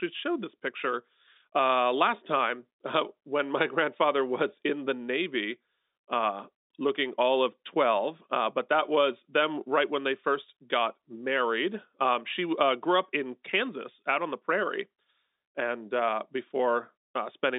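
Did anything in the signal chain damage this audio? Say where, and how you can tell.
No, nothing in the chain damaged this speech. The G.711 telephone coding is working as intended: the sound is confined to the line band of about 250 Hz to 3.7 kHz, consistent with 64 kbps mu-law, with only the faint level-following grain that format carries.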